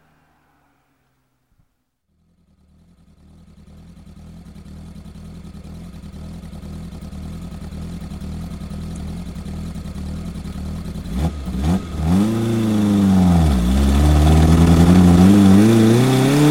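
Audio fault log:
8.92–8.97 s, damaged data in a compressed stream: a brief glitch. Corrupted frames lost decoder sync until the next frame header.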